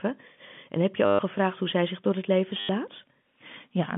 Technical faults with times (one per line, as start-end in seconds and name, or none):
1.06-1.19 packet loss with last packet repeated
2.60-2.69 packet loss with last packet repeated